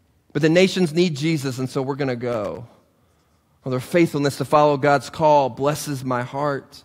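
From 2.31 to 2.57 s, the speech is broken by an irregular burst of crackle and scratching, lasting about a quarter of a second. This is loose connector crackle. A worn or dirty contact somewhere in the cable run is shifting and rapidly making and breaking the connection, so the signal is chopped into ragged fragments during that span. Any DC present on the line turns each break into a small pop, giving the scratchy texture.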